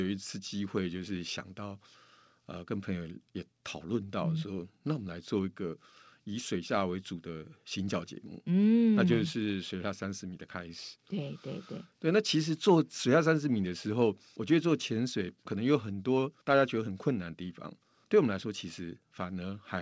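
No technical faults are audible anywhere in the recording.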